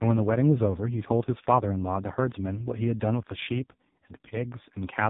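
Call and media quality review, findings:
AMR narrowband mobile codec, whole clip. Speech band-limited, nothing above about 3.8 kHz. Heavy buzzy, synthetic coloration, which fits a low AMR-NB mode around 5 kbps. Vocal-tract model plus sparse pulses per 5 ms subframe can't carry real speech detail at that rate.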